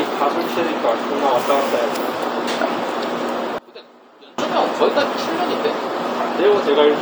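A recording of everyday sound that drops by about 24 dB from 3.58 to 4.38 s, most likely because one channel inverted cancels centred content in mono. Unlike a gain dip or dropout, a faint residue of the mismatch between the channels remains.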